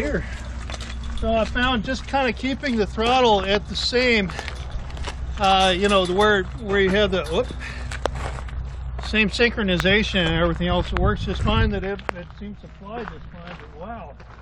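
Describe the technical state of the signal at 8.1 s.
A single loud pop sits at 8.06 to 8.08 s, peaking roughly 20 dB above the surrounding signal. It is most likely a brief voltage step from a plug, switch or static discharge that the downstream circuitry shaped into a short pulse. It is heard as one sharp thump over the sound, which continues beneath it. On a waveform it shows as a tall, narrow spike; on a spectrogram, a thin vertical stripe spanning all frequencies.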